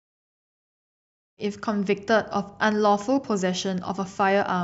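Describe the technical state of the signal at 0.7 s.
At 0.7 s the signal is intact, with no fault present at that moment.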